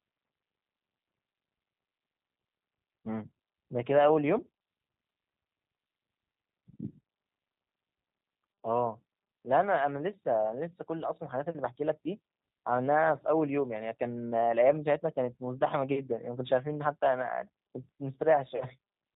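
Throughout, the speech passes through a G.729 codec, whose low-rate model of the vocal tract points to about 8 kbit/s and cuts everything above 4 kHz, leaving plainly rough, synthetic speech. From 18.56 to 18.65 s, VoIP packet loss concealed by the speech codec removes about 40 ms, which fits two lost packets. The decoder stretches the last sound into a fading buzzy tone or coloured noise, then recovers weakly.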